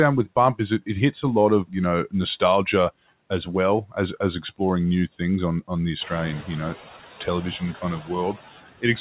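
Throughout the speech, noise suppressor artifacts pull the background down by about 15 dB between words, leaving residue all sitting below 4 kHz as the narrowband call path passes nothing higher.

At 6.0 s, just after "things on on the", the room noise jumps by roughly 17 dB. The noise suppressor is catching up: for 0.75 s it cuts only about 6 dB, so a brighter noise band shows in the spectrogram before fading.

From 8.0 to 8.1 s, speech is cut by the noise suppressor, which drops a short stretch by about 10 dB. The sound seems swallowed, and the waveform shows a brief dip in the envelope.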